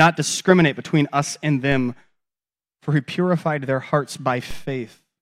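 A DC step at 4.51 s, right after "he purified their hearts", shifts the zero line by about -22 dBFS, heard as a low thump; the offset then decays slowly, like a 2 Hz high-pass.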